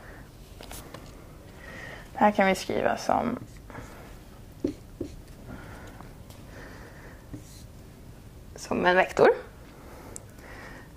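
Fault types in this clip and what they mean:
Nothing here to list, since no technical faults turn up anywhere in the audio.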